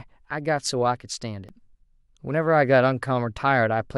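At 1.49 s the speech has an overlap between stream segments: two adjacent segments claimed a few of the same milliseconds, so the player discarded that stretch even though it was never duplicated. About 6 ms of real sound is missing, and the waveform jumps straight across the cut, heard as a single small click or hitch. Unlike a dropout, no silence or gap is inserted; the audio simply lurches slightly forward, consistent with a segment boundary near that point.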